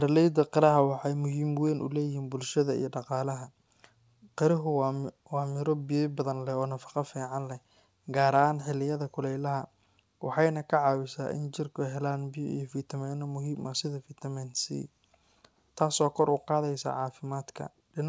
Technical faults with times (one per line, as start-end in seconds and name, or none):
none